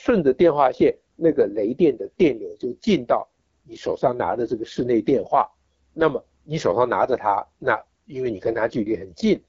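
From start to finish the speech sounds rough and raspy, with plainly audible coding damage and nothing above about 7.6 kHz. This is the AMR wideband (HD Voice) codec: its pulse-driven vocal tract model is starved of bits, which points to the 8.85 kbit/s mode.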